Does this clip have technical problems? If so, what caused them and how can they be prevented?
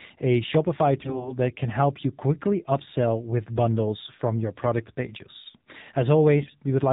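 Yes. Throughout, the AMR narrowband mobile codec cuts everything above 4 kHz and makes the speech buzzy and synthetic, which fits a low mode near 7.4 kbps. Unlike plain band-limiting, the voice model itself sounds artificial. Using a wideband codec or a higher AMR mode prevents it.

AMR bit errors turn the speech hoarse and gargly from 1.00 to 1.36 s, just before "that can help you", and from 6.41 to 6.52 s. Around 7 percent of the weaker bits were flipped, so the excitation pulses and finer parameters were misplaced. Unlike dropped frames, there are no gaps and the pitch and level hold. A stronger radio link or better error protection and concealment prevents it.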